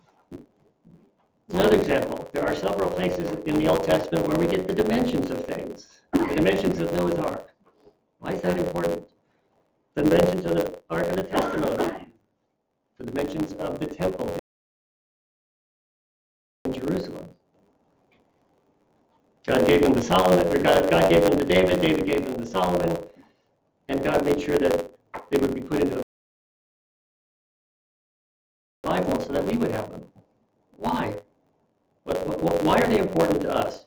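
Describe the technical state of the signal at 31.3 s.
Block size mismatch (truncated) is present at 31.3 s, as it is throughout. Each written block, which fits a 512-sample size, loses its tail before the next stage reads it. This produces a buzz at about 92 Hz and makes the audio run 1.07 times fast at roughly normal pitch.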